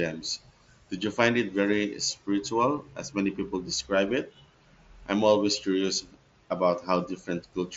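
Nothing goes wrong anywhere in the speech here; it simply comes across as you'd expect from a Bluetooth headset on the mSBC wideband codec, with the top end stopping around 8 kHz and a touch of the codec's light grain on the louder moments.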